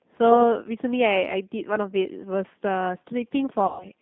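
Speech runs through a G.729 codec for the whole clip, with plainly audible coding damage. The line is confined to roughly 150 Hz to 3.7 kHz, so there is no air above that, and the voice has the slightly rough, synthetic grain of a coder that rebuilds each 10 ms frame from a vocal tract filter, a pitch predictor and a handful of pulses. That combination fits an 8 kbit/s G.729A stream. From 3.66 s to 3.85 s there is VoIP packet loss concealed by the speech codec. About 140 ms of audio is missing, which is consistent with seven 20 ms packets. The decoder fills the gap by repeating its last pitch and filter at falling gain, so the sound smears into a fading buzzy tone or coloured noise. Because each frame depends on the previous one, the signal stays weak or distorted to the end of that window rather than recovering at once.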